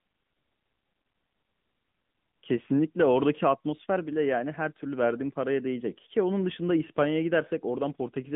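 From start to finish the speech runs through an AMR narrowband mobile codec. Nothing passes above 3.8 kHz, and the band sits roughly between 150 Hz and 3.6 kHz. The coding damage is plainly audible, buzzy and synthetic, which fits a mid-rate mode near 10 kbps.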